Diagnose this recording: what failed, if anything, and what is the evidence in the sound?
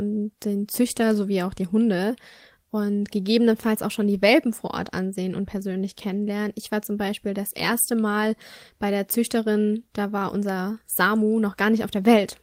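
Nothing failed in this recording.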